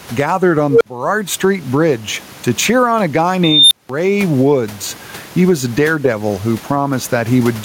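Speech clip with gain pumping all the way through, with a swing of roughly 20 dB, over room background about 32 dB under the speech. That's most likely a gain set far too hot with a fast limiter clamping down on each loud moment, so everything sounds squashed. There are also two unstable filter blowups, where a recursive filter runs away: from 0.70 to 0.85 s a low tone near 500 Hz balloons over about 104 ms, clips, then drops to roughly 46 ms of silence; right after "cheer on a guy", from 3.44 to 3.89 s, a squeal around 4 kHz grows over about 272 ms before about 186 ms of dead air while the filter resets.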